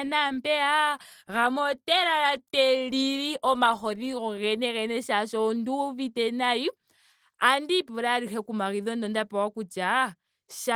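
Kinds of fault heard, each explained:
The speech carries the light marks of Opus voice compression at 24 kbps in hybrid mode, with the band kept fullband and content reaching up to about 20.4 kHz, and no fault can be heard in the signal.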